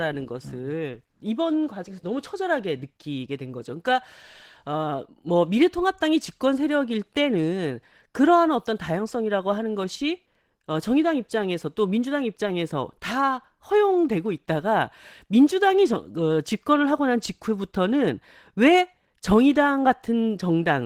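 From start to finish the speech sounds plainly hoarse and slightly robotic, clear evidence of Opus voice compression. The damage fits hybrid mode at a low rate, around 16 kbps: a linear-prediction coder handles the band up to 8 kHz and quantises the excitation coarsely, while a thinly coded transform layer stretches above it to full bandwidth, leaving the top end present rather than cut off.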